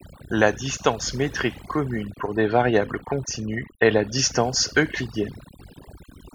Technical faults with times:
0.00-6.34 overdone noise removal

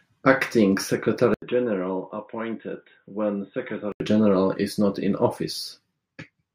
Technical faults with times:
1.34-4.00 input switched to a poorer device

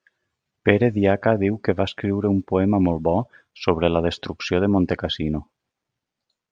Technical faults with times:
none

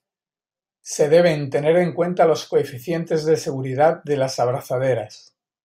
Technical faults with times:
none

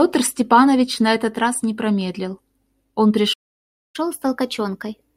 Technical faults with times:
3.33-3.96 playback stall
3.96-5.16 catch-up at higher speed

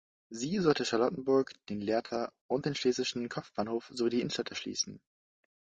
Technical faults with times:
0.00-5.70 low-delay AAC compression
2.05-2.11 AAC frame loss with concealment

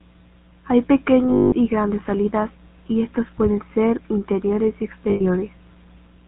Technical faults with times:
0.00-6.28 GSM full-rate codec
1.30-1.54 lost GSM frames
5.10-5.21 lost GSM frames

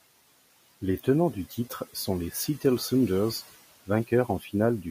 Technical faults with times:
1.50-2.08 speech cut by the noise suppressor
4.28-4.50 speech cut by the noise suppressor

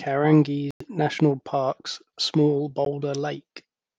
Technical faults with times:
0.71-0.82 Bluetooth dropout
2.85-2.87 Bluetooth dropout

